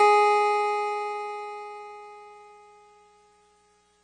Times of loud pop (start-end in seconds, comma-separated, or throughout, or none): none